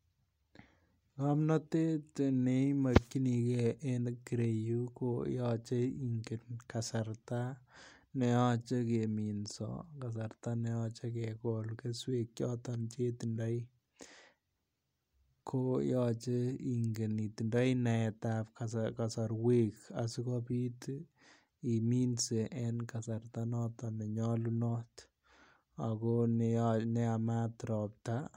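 Nothing technically wrong turns up anywhere in this speech recording, so there's no fault to point to here.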